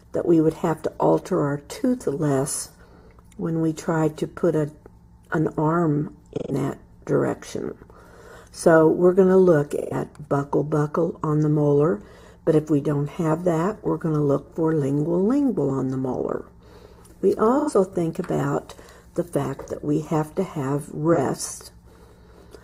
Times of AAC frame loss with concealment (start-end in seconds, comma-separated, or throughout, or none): 2.63-2.77, 6.38-6.52, 9.71-9.93, 17.59-17.71, 21.13-21.19